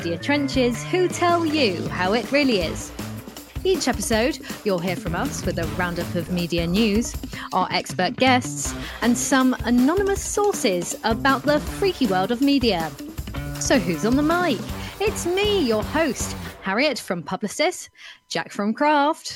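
From start to end the clip carries USB whine, a steady tone fixed at 1 kHz, sitting faint, roughly 45 dB below the main sound. The bus draws current in 1 ms frames, and that once-per-millisecond pulsing has leaked into the audio through shared power or ground, so it is heard as a thin, constant whistle. On a spectrogram it appears as a sharp, unbroken horizontal line at 1 kHz running the full width of the clip.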